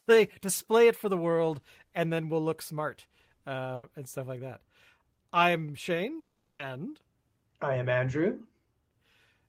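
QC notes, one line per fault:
3.75–3.85 s, burst of packet loss: the speech briefly turns into a held buzz or soft hiss that sinks in level for about 80 ms, then picks up again a little further along, with roughly 80 ms of speech skipped. A short run of packets never arrived in time, so the receiver stretched the last bit of sound it had and faded it down to cover the gap before resuming with later audio.
6.19–6.61 s, long network dropout: the speech gives way to a fading buzz or hiss that stretches on for about 400 ms, and by the last 120 ms or so it has died away to silence. When the speech returns it has jumped ahead, with about 400 ms gone. This is likely a long break in incoming audio, during which the receiver kept extending and attenuating the final sound until nothing remained.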